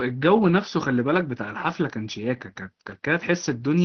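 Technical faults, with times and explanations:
No faults found; the speech carries through the Opus call path at 20 kbps with its expected top end near 6 kHz.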